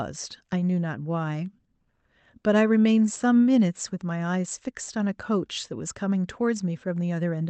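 A speech recording with nothing technically wrong in it.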